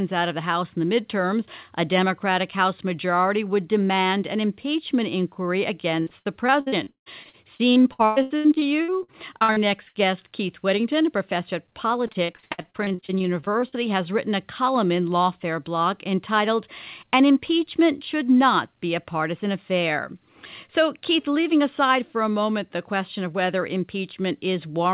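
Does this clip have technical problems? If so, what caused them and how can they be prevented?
Yes. Repeated packet loss (robotic sound) occurs at 6.0–9.97 s, after "demand an impeachment inquiry," and at 12.07–13.74 s, between "a professor of" and "has written a column." About a third of each stretch is missing and is filled by repeating the last sound. This makes the audio choppy, with pieces missing. The longest hole is 175 ms. A steadier network connection or a larger jitter buffer would prevent this.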